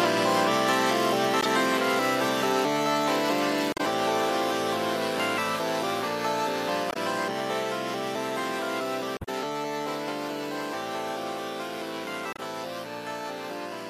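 Short glitches break through at 1.41, 3.72, 6.90, 9.17 and 12.33 s, each 46 to 120 ms long. These are damaged data in a compressed stream: corrupted bytes make the decoder misread frames and lose sync until it finds the next valid header.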